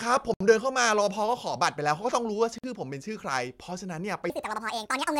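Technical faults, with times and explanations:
0.34–0.41 s and 2.58–2.64 s, Bluetooth stall: the speech drops to silence for 66 ms and then 52 ms, then carries on. These gaps are likely radio interference delaying packets, so the headphones' buffer emptied and playback waited for the resent data.
4.30–5.19 s, section at the wrong speed: the final stretch of speech turns high and hurried, raised by roughly ten semitones. It runs 1.66 times too fast, likely because this part was played against the wrong clock, so pitch and tempo rose together.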